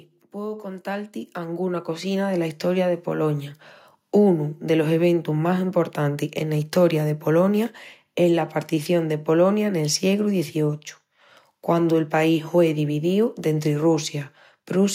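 From 0.32 s to 3.63 s there is automatic gain rising: the gain control judged the incoming speech too quiet and raised its gain step by step, by about 12 dB over those three seconds or so. Because the gain acts on everything, the voice and the background noise swell together. On a waveform the envelope widens steadily across that span, and on a spectrogram the whole frequency range darkens evenly, noise floor included.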